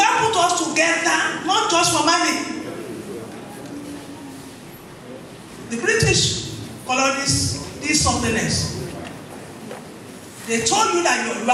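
No technical faults can be heard anywhere in the audio, and the signal holds steady throughout.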